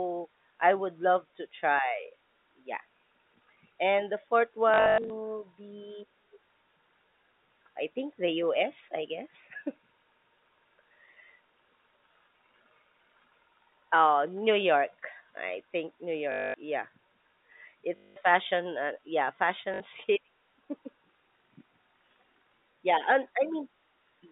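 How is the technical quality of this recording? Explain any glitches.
The recording has four bursts of packet loss with the last packet repeated, heard through a telephone band of roughly 150 Hz to 3.7 kHz from G.711 A-law coding.

Each burst sounds like a short, buzzy robotic stutter. They occur at 4.74–5.1 s, just after "and the fourth"; at 16.32–16.54 s; at 17.96–18.16 s, just before "fashion uh yeah"; and at 19.74–19.8 s, just after it. The first burst is the most broken up: about 240 ms of audio went missing, scattered across 360 ms, with the longest gap lasting 100 ms. The later gaps last 220 ms, 200 ms and 60 ms. The sizes of these gaps fit 20 ms packets. When packets went missing, the receiver filled each hole by replaying the last packet it had received. Those repeats seldom line up with the pitch cycle. A run of repeats also buzzes at 50 Hz, the packet rate.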